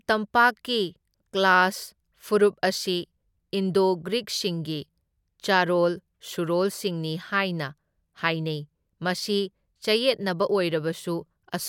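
The speech recording contains no audible technical faults. Nothing in the audio stands out for a time mark or an explanation.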